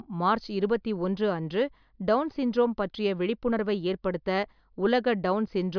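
No audible technical faults.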